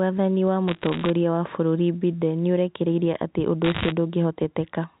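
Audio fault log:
0.68–1.10 s and 3.64–3.92 s: bit errors on a digital phone line. Sharp ticks and crackle sit over the speech, denser in the second burst after "nĩũrekereirie atĩ ũndũ". Flipped bits in G.711 A-law samples each corrupt one sample, and hits on sign or high-order bits produce clicks. The error rate is roughly under 1% in the first burst and roughly 1.5% in the second.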